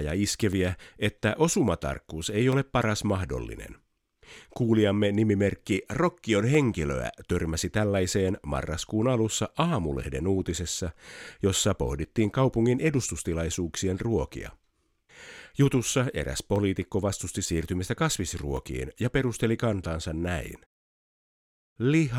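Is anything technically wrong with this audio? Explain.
Yes. Periodic USB or driver dropouts recur every 2.0 s, from 0.53 to 20.57 s. A stalled bus drops about 2 ms of speech. Each silent gap that falls on speech ticks.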